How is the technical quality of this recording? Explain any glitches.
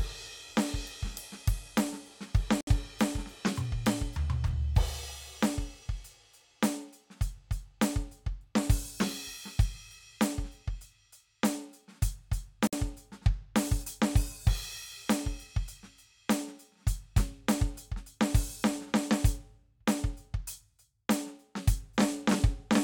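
The music has two brief silent dropouts. These are gaps at a join of encoded pieces, at 2.61 to 2.67 s (about 65 ms) and 12.67 to 12.73 s (about 54 ms), ten seconds apart. Each separately encoded piece kept its start delay and end padding. The music cuts out, then resumes where it stopped.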